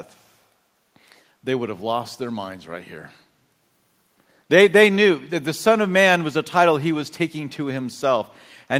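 From 0.16 to 0.21 s a very faint echo leak appears, a copy of the speech arriving 165 ms late, far below the direct sound, likely from an echo canceller letting loudspeaker pickup through. On a spectrogram it shows as a dim, delayed repeat of the speech pattern.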